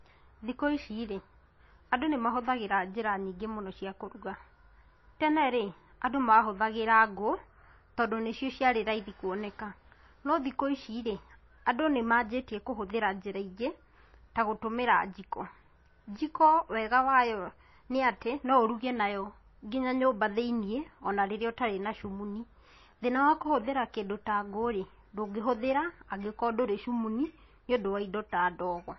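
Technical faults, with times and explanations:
Throughout, MP3 compression: nothing comes through above about 5.8 kHz, and the speech has that watery, swirly edge with smeared consonants, which fits a very low bitrate, somewhere near 24 kbps. The likely cause is an encoder starved of bits, chopping the treble and dropping weak detail frame to frame.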